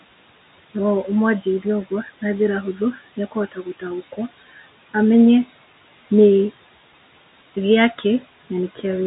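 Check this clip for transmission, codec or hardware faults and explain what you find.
Two noise-suppression faults are present, one running through the whole clip and one hitting the speech briefly.

Noise suppressor artifacts, throughout: the suppressor pulls steady-noise bands down by about 16 dB frame by frame, so the room noise dips between phrases and swells under speech.

Speech cut by the noise suppressor, 2.76–2.99 s and 3.52–3.83 s: the suppressor mistook speech for noise, dropping it about 8 dB then 13 dB, leaving roughly a tenth of a second swallowed each time.

The room noise sits about 16 dB under the speech, and the G.711 A-law telephone coding at 64 kbps cuts everything above 3.8 kHz.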